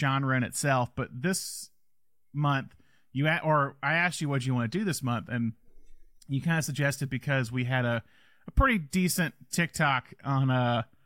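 No technical faults can be heard in this recording.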